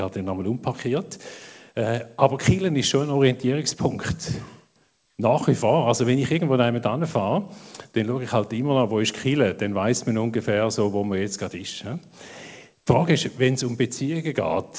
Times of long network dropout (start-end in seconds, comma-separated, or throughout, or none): none